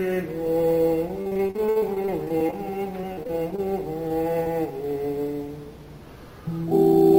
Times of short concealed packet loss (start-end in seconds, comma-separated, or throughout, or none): 4.08-4.12, 4.44-4.48